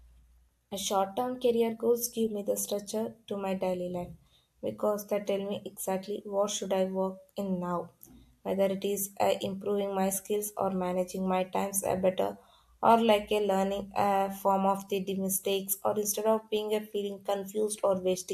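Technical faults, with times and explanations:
Nothing in this speech recording stands out as a technical problem anywhere along its length.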